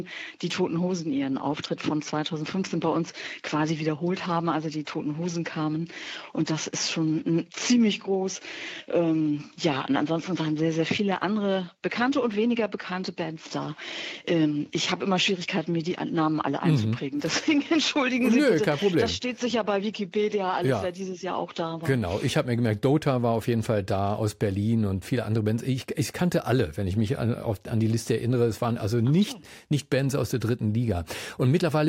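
Faint regular ticks, about five a second, run from 0.12 to 31.86 s. These are clock slip clicks, likely from unsynchronised clocks about 100 ppm apart dropping or repeating single samples.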